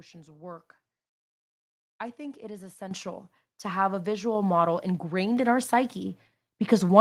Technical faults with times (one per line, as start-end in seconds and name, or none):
2.91 microphone volume stepped up